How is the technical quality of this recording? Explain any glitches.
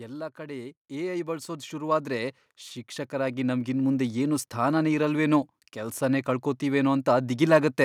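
The recording has one fault, an automatic gain rising. From 0.36 s to 4.1 s the gain control, judging the input too quiet, steadily raises its level by about 14 dB, so the speech and the background noise swell louder together over nearly four seconds.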